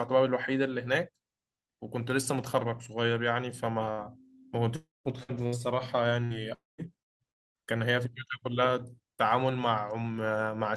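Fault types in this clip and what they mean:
Burst of packet loss: at 3.91 s the sound is stretched into a brief held sound that fades for about 65 ms, then jumps ahead with roughly 60 ms missing, too short to reach silence.
Long network dropout: at 4.76, 6.54 and 7.31 s a fading continuation gives way to about 0.2 s of silence before audio returns, likely a stalled connection rather than scattered losses.
Repeated packet loss (robotic sound): from 5.23 to 7.22 s four separate gaps, the longest 170 ms, are patched and leave choppy sound with pieces missing, unlike one isolated hole.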